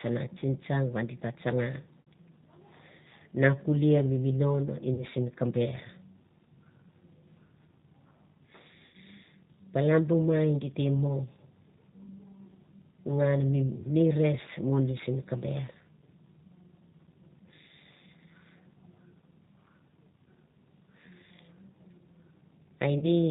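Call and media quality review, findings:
G.729 codec, whole clip. Speech is capped at 4 kHz, with a rough, slightly synthetic buzz. That fits G.729A at 8 kbit/s: the speech is rebuilt from a vocal tract filter and a sparse pulse excitation. The texture stays steady rather than swirling, which separates it from the watery artefacts of a transform codec.

VoIP packet loss concealed by the speech codec at 2.02–2.08 s, 4.94–5.05 s (after "na kulie mi minon", before "simi ka ber"), 8.86–8.96 s and 22.99–23.05 s. Gaps of 60, 40, 80 and 20 ms fit roughly three, two, four and one 20 ms packets. The decoder stretches the last pitch and filter into a fading buzzy tone or coloured noise, not silence or a click. Speech stays weak briefly after each gap, which tells it apart from a plain dropout.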